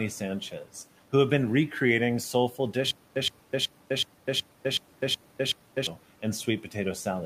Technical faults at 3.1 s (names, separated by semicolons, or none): stutter with silent gaps